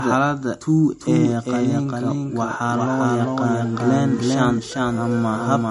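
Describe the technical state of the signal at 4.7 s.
At 4.7 s the speech carries a doubled audio track, present through the whole clip. A second full-band copy trails the original by roughly 400 ms at about the same level. It has no decay or room colouring, so it reads as a clean, out-of-step duplicate rather than an echo. This likely comes from the signal being captured twice, once through a slower path, or from an edit that left two misaligned copies.

The same moment also shows low-bitrate audio saved at a high bitrate. Nothing is present above 11.2 kHz, and the smeared, swirly coding artefacts of a heavily compressed MP3 remain audible. The sound points to an earlier low-bitrate MP3 encode, likely re-encoded at a much higher bitrate. That second pass enlarges the file but cannot restore the discarded high band or undo the first encoder's damage. It adds essentially nothing of its own.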